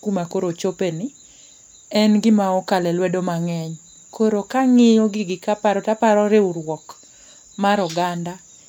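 A brief glitch from 1.48 to 1.52 s, right after "kuma koro ochopeni", is damaged data in the compressed stream, where the decoder lost frame sync.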